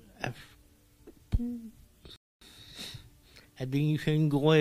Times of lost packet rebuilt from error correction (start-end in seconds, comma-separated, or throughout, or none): none